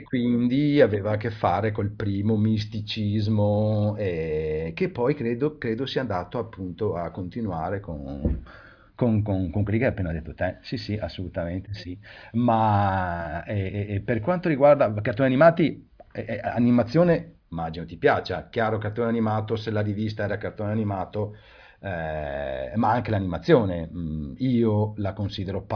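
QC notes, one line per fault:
No faults found in this speech clip. Nothing in it calls for a QC entry.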